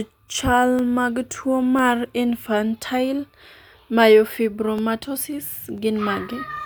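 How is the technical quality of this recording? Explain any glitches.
The speech recording has one recurring glitch. Periodic USB or driver dropouts occur once per second from 0.79 to 5.78 s: a blocked audio driver or bus briefly silences about half a millisecond each time, heard as regular ticks.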